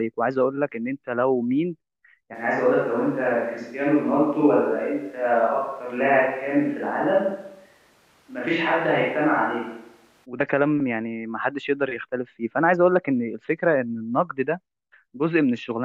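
At 2.36 s the speech abruptly turns roomy and hollow, with thinner bass, and it snaps back to its close, full sound at 10.24 s. This points to a switch to a distant microphone, likely because the close microphone's signal dropped out and a farther pickup such as a camera mic was used instead. The level stays about the same across the switch, and room noise is low, roughly 35 dB below the speech.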